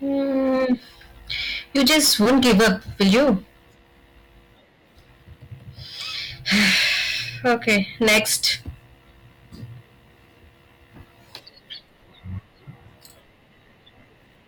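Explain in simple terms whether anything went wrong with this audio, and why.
The speech turns rough and fuzzy on loud parts at 0.35 to 0.74 s, mildly, and harshly at 1.76 to 3.33 s, 6.48 to 7.01 s and 7.46 to 8.52 s. That is hard clipping: the sound was too big for the system, so its peaks were sliced flat.

At 2.25 to 2.28 s and at 12.38 s the speech jumps ahead. These are compressed frames skipped. About a twentieth of a second of audio went missing each time, which fits a few short 10 ms chunks being lost or rejected as damaged.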